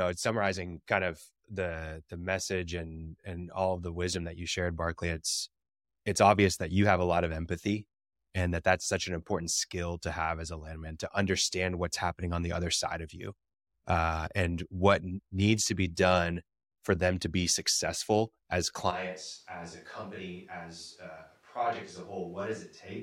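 From 18.92 s to the end, speech turns suddenly roomy and thin, about 10 dB quieter and noisier, likely a switch to a distant microphone.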